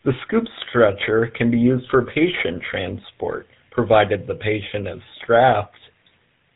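From start to finish the speech carries the sound of the GSM full-rate codec, and the damage is plainly audible. The codec rebuilds the voice from a vocal-tract model fed with a sparse pulse excitation, which leaves a buzzy, gravelly roughness. The coarse bitrate points to 13 kbps, and nothing comes through above 4 kHz.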